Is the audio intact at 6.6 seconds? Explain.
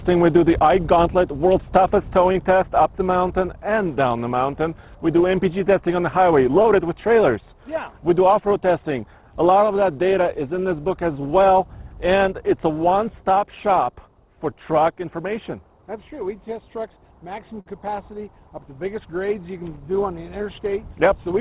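No. From 6.62 to 6.66 s there is a brief smear or wobble, a short concealed packet loss: about 20 ms of audio arrived too late to decode, and the receiver covered 16 ms by extending the preceding sound before blending back into the real signal.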